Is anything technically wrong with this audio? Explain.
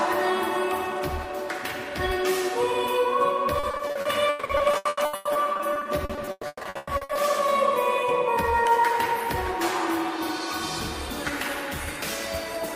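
Yes. From 3.59 to 7.17 s there is repeated packet loss (robotic sound): the stream kept dropping or receiving packets too late, leaving 32 gaps totalling 1.52 s, the longest 140 ms. Each hole was bridged by extending the last received sound, so about 42 percent of that stretch is synthetic fill. The result is choppy, clipped audio with a robotic texture as fragments repeat and real content goes missing.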